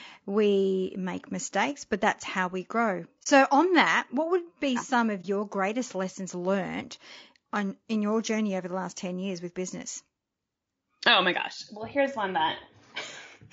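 Throughout the speech there is plainly audible low-delay AAC compression, likely AAC-ELD at a rate that fits about 32 kbps: short coding frames blur the pitch harmonics, leaving a rough, grainy texture with noise between them, unlike steady broadband hiss, which would not track the voice.

From 3.23 to 3.27 s and again from 5.21 to 5.25 s comes AAC frame loss with muting. In each case one frame's worth of audio seems to have been lost and silenced, and the overlapping windows fade the sound down and back up. The result is a brief dip, which distinguishes it from a hard sample dropout.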